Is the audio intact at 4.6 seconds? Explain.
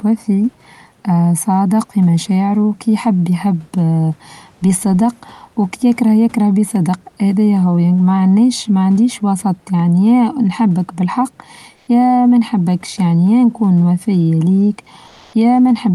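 Yes, the audio is intact at 4.6 seconds: the speech there passes through the call path and sits well above the low room noise with no fault present.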